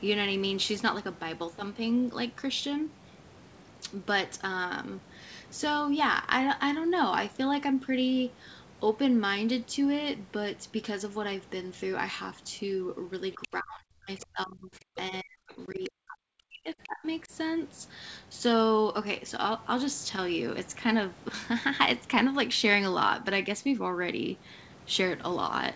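At 13.33 to 13.53 s a second voice leaks through, roughly 15 dB below the main speech, and returns as a faint scrap at 15.84 to 15.89 s. This is the other side's voice leaking through, likely loudspeaker echo the canceller left behind. Unlike suppression, it adds sound rather than removing it.

Overlapping it, from 13.36 to 14.93 s, the main speech is suppressed in double talk, sinking by some 35 dB for about a second in total. The same happens from 15.1 to 17.06 s, reaching around 40 dB down across roughly a second and a half, then briefly and only slightly at 17.25 to 17.32 s. The likely cause is an echo canceller that could not separate its own talker from the echo while both spoke. The talker's own speech is turned down while the far side plays, which separates this from a simple level fade.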